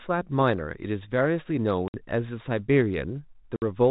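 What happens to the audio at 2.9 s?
Nothing goes wrong at 2.9 s: the speech carries on intact through the G.711 telephone coding, with no dropout, click or other fault at that moment.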